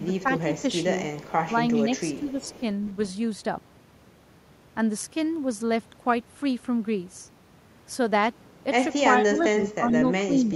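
Echo leak affects this speech recording at 0.0–0.05 s, 1.16–2.92 s and 9.91–9.96 s: a copy repeats 401 ms late, likely from a loudspeaker pickup an echo canceller missed. Speech suppressed in double talk at 1.85–2.45 s and 9.21–10.56 s dips the voice by about 5 dB, then about 15 dB, likely as overlapping talk makes the canceller turn both its talker and the echo down.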